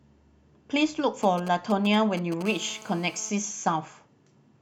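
From 1.23 to 2.43 s, GSM signalling bursts break into the speech: a galloping dit-dit-dit of ticks and short 217 Hz buzzes, roughly 15 dB below the voice. A nearby 2G phone's intermittent radio pulses are rectified in the audio circuitry. A spectrogram shows clustered vertical stripes; the waveform shows spiky packets.

From 2.45 to 3.30 s, a steady GSM phone buzz follows, the phone now holding a call: a hard, raspy 217 Hz tone, about 19 dB below the speech, from continuous burst transmission being rectified. On a spectrogram it forms an unbroken ladder of horizontal harmonics spaced 217 Hz apart.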